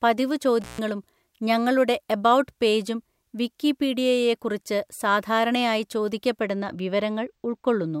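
From 0.61 to 0.79 s there is an intermittent contact. A loose plug or cable connection opens briefly, and the speech drops out for about 0.13 s. The break is bracketed by crackle as the contact scrapes open and then closes again. While the line is open, only a faint hiss remains.

At 6.41 s, just after "എബൗട്ട് പേജും വിക്കിപീഡിയയെക്കുറിച്ച് സാധാരണയായി", channel delay (comb filtering) begins and continues to the end. One channel runs late by only a couple of samples, a few hundredths of a millisecond. When the two channels sum to mono, the shared content cancels at evenly spaced frequencies. With so short a delay, the first notch sits high, near 10 kHz. The top end sounds dulled.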